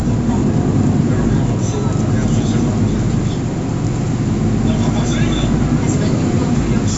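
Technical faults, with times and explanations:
Nothing stood out on listening to these sounds, which come through the call chain with their content reaching up to about 8 kHz.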